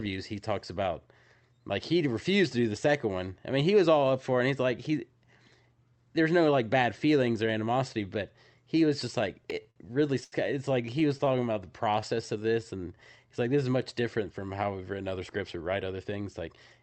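Speech carried over an Opus call path, with a spectrum that stops near 8 kHz. Repeated stalls (stutter) occur at 9.43–9.79 s and 10.86–11.36 s, where packets arrived late and the emptied jitter buffer held the last sound. The first run has four gaps totalling 84 ms (longest 53 ms), and the second has five gaps totalling 49 ms. On a spectrogram these look like short smeared, flat-lined frames. A short stall from a late packet at 10.24–10.35 s stretches one sound by 83 ms, showing as a frozen harmonic stripe. The jitter buffer slow-down from 11.41 to 13.35 s repeats pitch periods to rebuild reserve, adding 231 ms and playing at 89% speed with unchanged pitch. Its waveform shows repeated identical cycles. The jitter buffer speed-up from 15.17 to 16.79 s cuts out pitch periods, removing about a fifth of a second and running at 113% speed. Its cycles keep their normal length, with whole periods missing.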